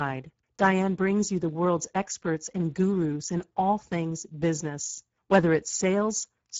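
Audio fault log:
Throughout: Speex codec. The speech has a noisy, hoarse texture from a low-rate CELP coder that has too few bits to model the excitation accurately, so the fine structure of the voice is replaced by coarse approximations. The damage is plainly audible and fits a bitrate near 10 kbps. Nothing is present above 7.6 kHz.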